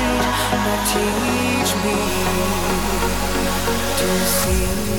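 From 2.06 s to the end of the clip, the sound turns grainy and rough. This is a low bit depth without dither fault: the error sits only about 15 dB below the signal, which fits roughly 4 bits. It was likely truncated rather than dithered, so the rounding error moves with the waveform. The result is a gritty distortion whose texture shifts with the sound.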